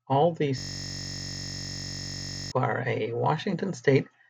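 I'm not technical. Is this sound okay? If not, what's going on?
No. From 0.58 to 2.52 s the speech stops and turns into a steady, flat buzz. That buzz is a system hang loop. The computer briefly froze, but the sound hardware kept replaying the last scrap of audio it had been given, a piece only about 21 milliseconds long, which fits a 1024-sample buffer. Repeating that tiny piece about 47 times a second, roughly ninety times in all, blurs into one droning tone instead of a stutter.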